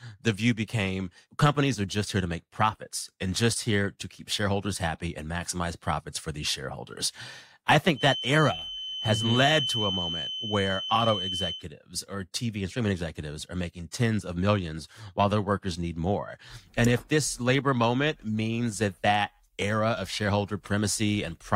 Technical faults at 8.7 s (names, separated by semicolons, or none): feedback whistle